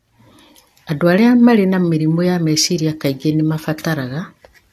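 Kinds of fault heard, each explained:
Generation loss: the speech sounds swirly and hollow, with smeared attacks and nothing above 14.3 kHz. That's more damage than one pass leaves. It's likely from about three rounds of lossy encoding, fitting AAC-LC near 64 kbit/s, each pass requantising on a shifted frame grid.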